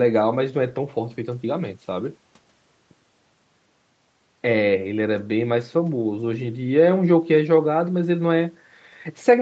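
No technical faults can be heard anywhere in this speech recording. The sound carries nothing above about 8 kHz, which fits a call path running the Opus codec at a wideband setting, and the codec's usual coding noise sits in the background as expected.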